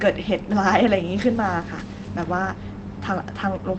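At 1.79 s there's a single lost packet rebuilt from error correction. One 20 ms packet went missing, but the next one carried a low-bitrate backup copy, and the Opus decoder played that instead. So there's no dropout, just a brief stretch where the speech turns rougher and a bit noisier. The call path has the coarser grain of Opus at a rate that fits about 24 kbps, with the audio topping out around 8 kHz.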